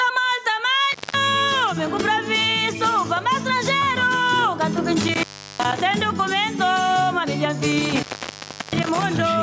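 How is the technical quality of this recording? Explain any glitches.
The recording has clear technical problems: the level pumps throughout, and three short dropouts break up the audio.

Gain pumping, throughout: the level swings by around 10 dB, pulled down under each loud sound. The likely cause is gain set far too high, with a fast limiter squashing the dynamics.

Intermittent contact at 0.92–1.15 s, 5.01–5.80 s and 7.72–9.03 s: a loose plug or cable opens for about 0.19 s, 0.36 s and 0.70 s, cutting out with crackle at each edge.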